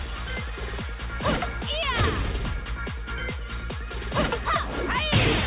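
No faults heard; the call path is audibly band-limited, with nothing above 4 kHz, consistent with a G.711 mu-law link at 64 kbps.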